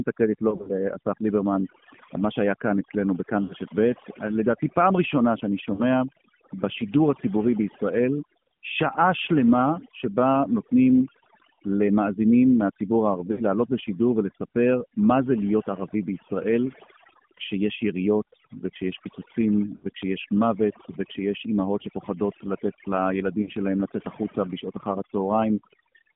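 Throughout, the speech passes through an AMR narrowband mobile codec. Its band runs from 150 Hz to 3.5 kHz, and its buzzy, synthetic timbre fits a low rate near 7.4 kbps. Overdone noise removal also runs throughout, leaving a lowered background that breaks up into twinkling specks. Lost AMR speech frames cause brief dips, warbles and smeared fades at 0.50–0.71 s (about 100 ms, scattered), 3.44 s, 5.74 s, 9.80 s, 11.54 s, 13.32 s, 19.76 s and 23.42 s. At each of these points the decoder stretched the last good parameters with falling gain.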